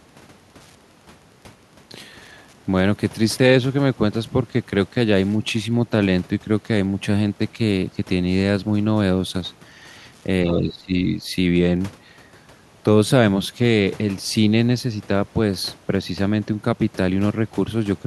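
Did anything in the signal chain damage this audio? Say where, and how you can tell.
Yes, two faults. From 0 to 12.02 s there is Wi-Fi interference in the analogue wiring: a faint, regular ticking about 45 dB below the speech, repeating every 102.4 ms, close to ten times a second. A nearby radio's beacon is being picked up and rectified by the circuit. Mains hum would be a continuous tone at 50 or 60 Hz and their harmonics, not discrete clicks at this beacon spacing, which is what marks this as radio pickup.

At 10.44 to 10.94 s, about half a second, the speech level drops by roughly 15 dB and then recovers. This is speech suppressed in double talk, a call-processing fault: the echo canceller most likely met simultaneous talk from the far end, could not tell the local voice from loudspeaker echo, and attenuated both. A network packet loss would cut to abrupt gaps or concealment artefacts, whereas this is a level dip.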